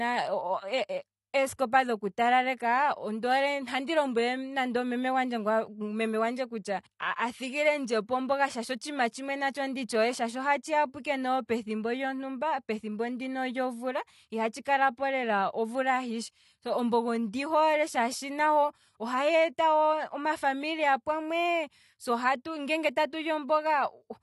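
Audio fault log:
Throughout, AAC compression: the speech has plainly audible codec damage, with nothing above 11.5 kHz, so consonants lose their top end and the sound turns dull and smeared. The hard cut-off and thinned upper bands are the signature of a perceptual coder short of bits, likely AAC-LC at a low rate, which fits roughly 32 kbps. At that budget the encoder discards high-frequency detail first, leaving sibilants fizzy and sustained sounds warbling.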